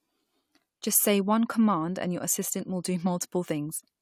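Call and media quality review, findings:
No audible faults found in this speech recording; nothing to attribute to capture, transport or playback.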